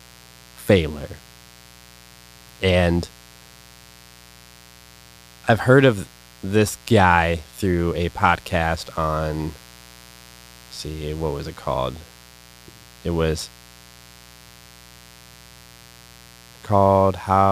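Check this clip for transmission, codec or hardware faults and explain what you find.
A mains buzz based on 60 Hz runs under the speech from start to finish, roughly 25 dB below it. Sharp switching spikes from a dimmer, rectifier or unshielded cable enter twice per cycle, producing a steady, raspy buzz. A spectrogram shows evenly spaced horizontal lines at 60 Hz multiples, reaching several kHz.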